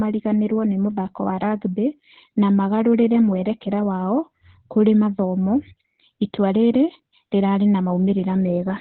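A speech recording carrying heavy Opus voice compression throughout: nothing above about 4.3 kHz survives, and the coarse narrowband SILK coding at 8 kbps leaves the speech muffled, hoarse and slightly robotic.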